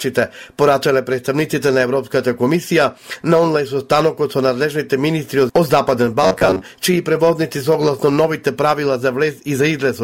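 From 6.23 to 6.64 s, robotic sound from repeated short buffers: a rigid 93.8 Hz buzz, likely from a roughly 10.7 ms chunk looping. The waveform shows identical repeating cycles, and the spectrogram shows evenly spaced harmonics.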